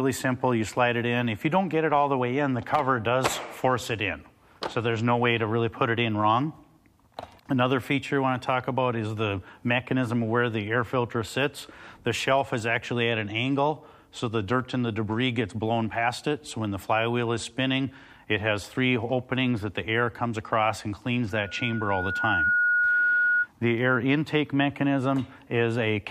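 From 21.31 to 23.48 s, loudspeaker feedback squeal: a 1.4 kHz tone swells over about a second, rising above the sound as one bright horizontal spectrogram line.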